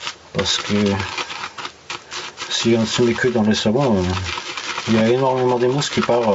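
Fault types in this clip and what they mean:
gain pumping: The gain swings by roughly 10 dB, so loud and quiet passages sit squeezed together. This is likely a fast limiter or compressor reacting to microphone gain set far too high.
loose connector crackle: From 4.84 to 5.01 s an irregular burst of scratchy crackle cuts through the sound. A worn or dirty contact is making and breaking rapidly as it shifts, so the signal is chopped on and off within that short stretch.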